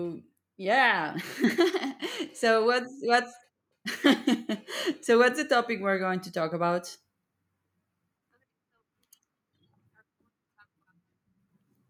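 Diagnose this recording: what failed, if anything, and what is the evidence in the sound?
What failed is the automatic gain rising in the call processing. From 5.05 to 6.86 s the speech and the room noise swell up together by about 4 dB, a slow climb as the AGC decides the input's too quiet and keeps nudging its gain upward.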